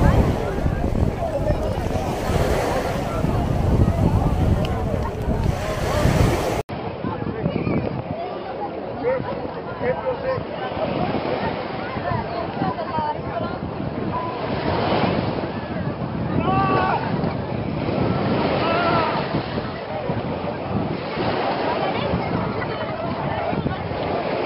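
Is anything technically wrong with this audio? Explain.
Yes. At 6.61 s the audio cuts out for about 80 ms, then continues to the end with nothing above 5.3 kHz, roughly 5 dB quieter, with a different tone and a new faint noise floor. The likely cause is an input switched to a poorer device, a narrower-band microphone or headset profile. A simple low-pass filter or codec bandwidth drop would dull the top end without also changing level, colouring and background noise at once after a gap.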